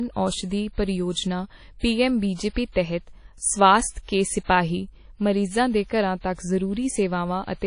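Across the whole speech clip the sound is washy and ringing, with a hiss that swells and fades with the signal and nothing above 10.1 kHz. This is likely WMA compression at a low bitrate near 32 kbps. A spectrogram shows a hard ceiling and patchy, smeared upper bands.

From 4.44 to 4.49 s a short hiss runs ahead of a sharp onset, about 51 ms of pre-echo. The codec spread quantisation noise across its block, filling the quiet gap before the attack. The waveform shows a low noise smear preceding the transient.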